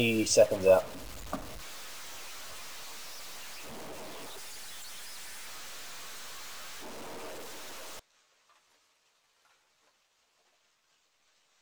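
From the start to 7.99 s, a stuck bit runs through the audio. Quiet passages fill with noise instead of falling silent. The likely cause is one data bit held fixed by a faulty line or converter, shifting about half the sample values.

From 4.26 s to 5.47 s, a section plays at the wrong speed. It runs 1.39 times too fast. Pitch rises about five semitones, so the sound turns high and hurried. This likely comes from playback or editing against the wrong clock.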